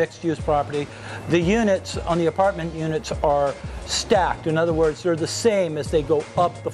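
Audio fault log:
2.13 to 2.41 s and 3.24 s, hard clipping. Peaks exceed what the signal path can carry by about 2 dB, so their tops are sliced flat. Those flat edges create high harmonics. The result is a brief crackle on the loudest moments, not continuous fuzz.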